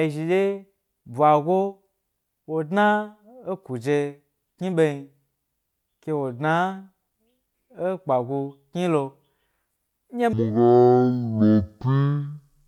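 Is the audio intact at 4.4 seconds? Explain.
Yes, at 4.4 seconds the audio is intact, with no dropout, click, distortion or other fault heard at that point.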